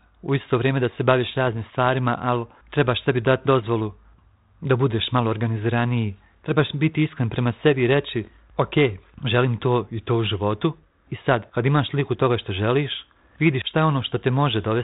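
Bit errors on an ADPCM link hit at 1.47 to 1.55 s and again, at a higher error rate, at 8.23 to 8.28 s. Flipped bits upset the decoder's step size and predictor, so each error rings on. Both bursts sound like pops and rough crackle with brief level jumps.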